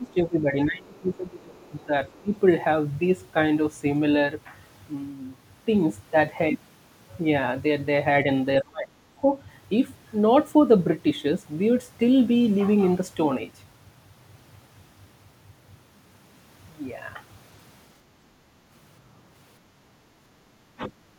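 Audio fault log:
0.00–1.91 s, 2.21–2.34 s, 8.62–9.05 s, 9.21–9.30 s, 20.75–20.92 s, speech suppressed in double talk: while both ends were talking at once, the echo canceller likely mistook the talker's speech for loudspeaker echo and attenuated everything. The speech sinks, by roughly 25 dB at the start, around 20 dB near 2.3 s and 20.8 s, about 35 dB at its deepest near 9 s, and only slightly at 9.2 s, so phrases thin out and break into fragments.
1.59–1.70 s, 2.07–2.39 s, other side's voice leaking through: the echo canceller likely failed to remove all of the far-end signal picked up from the loudspeaker, so residual echo reached the outgoing channel. A faint second voice, roughly 30 dB below the main speech, can be heard in these brief scraps, overlapping the start of the clip.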